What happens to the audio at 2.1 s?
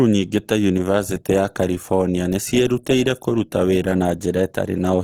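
At 2.1 s you're hearing Opus compression, and it isn't a one-off: the same damage runs through the whole clip. The grain and roughness on the speech likely come from Opus in its music (CELT) mode at a low rate, something like 16 kbps. Short on bits, the encoder keeps each band's energy but refills the detail with folded or noise-like content, so tones go gritty rather than swirly. The bandwidth stays full, reaching about 20.2 kHz.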